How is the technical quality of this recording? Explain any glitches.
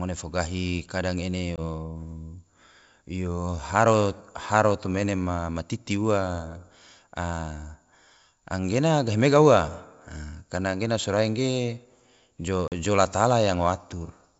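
Two brief dropouts from packet loss on an ADPCM call mar the wideband G.722 coding of this speech. At 1.56 to 1.59 s, about 20 ms of audio is replaced by hard-edged silence, consistent with one lost packet. At 12.68 to 12.73 s, a 40 ms gap fits two lost packets. Because ADPCM transmits differences from a predicted signal, the receiver's predictor and step size drift away from the sender's across each gap. Speech therefore resumes with slight distortion before resettling.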